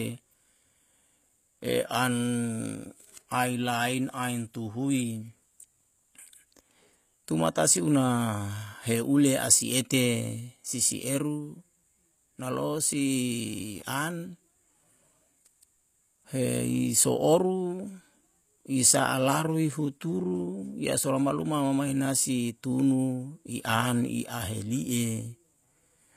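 Speech runs its whole length with gritty, metallic sibilants and a synthetic sheen on the treble, with nothing above 14.9 kHz. The likely cause is HE-AAC compression, whose band replication rebuilds the upper spectrum from copied lower bands, at a rate that fits roughly 24 kbps.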